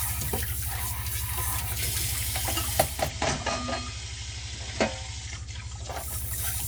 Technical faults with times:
2.81-6.18 digital radio blending to analogue

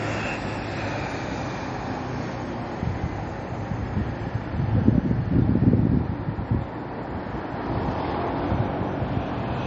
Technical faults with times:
0.00-9.67 MP3 compression

